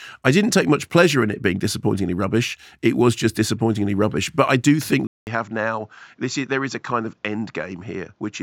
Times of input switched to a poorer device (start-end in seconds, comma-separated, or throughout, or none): 5.07-8.42